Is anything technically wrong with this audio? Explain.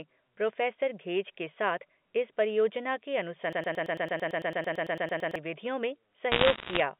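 Yes, there are two faults in this telephone-band speech.

From 3.53 to 5.36 s there is a broken-record loop. A 0.11 s fragment repeats exactly, back to back, about 16 times. Playback likely stalled and kept resending its last buffered piece. The speech in that span is lost.

From 6.32 to 6.8 s there are bit errors on a digital phone line. Roughly one or two bits in a hundred are flipped. Each flip corrupts one sample. Hits on high bits give sharp ticks, heard as crackle over the narrow G.711 sound.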